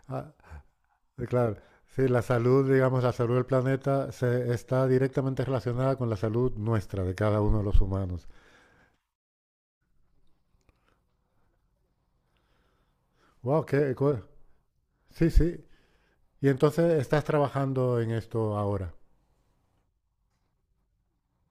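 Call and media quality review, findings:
No faults found in the speech recording. Nothing here needs a ticket.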